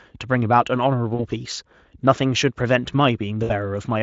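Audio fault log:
1.15–1.25 s and 3.43–3.51 s: VoIP packet loss concealed by the speech codec. About 40 ms, then 60 ms, went missing, which fits two and three lost frames. The decoder stretched its last sound into a fading buzzy tone or coloured noise. Speech stays weak briefly afterwards.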